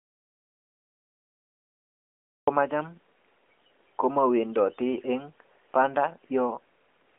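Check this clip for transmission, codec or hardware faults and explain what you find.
There is one fault: an audio dropout to silence. It is already under way when the clip begins and lasts until 2.47 s. The input was likely lost, through a disconnected device, failed link or mute, while silence kept being written. The gap is silent, with no room tone. Speech then starts abruptly. The narrowband mobile coding, AMR-NB at 12.2 kbps, is heard as a telephone-band sound with nothing above 3.8 kHz.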